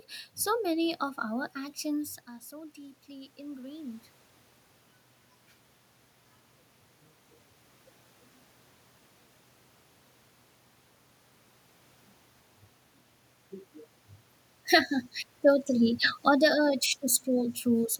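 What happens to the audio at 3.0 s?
At 3.0 s the automatic gain is rising, from 2.49 to 4.11 s, just after "of our actions are". The talker's level drops by about 15 dB, and the gain control responds by raising its gain gradually by about 3 dB, so voice and room noise swell together.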